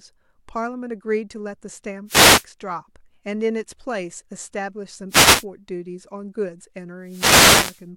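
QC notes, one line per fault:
2.06–2.45 s, 5.09–5.45 s and 7.03–7.86 s: wireless microphone noise hits. The FM radio link fades as reflected paths cancel the carrier, so receiver hiss swells over the speech as a brief swish of static, with the last, longest hit running about 0.8 s. On a spectrogram each shows as a broadband vertical band of noise smearing over the speech harmonics. The waveform shows a fuzzy, raised floor there.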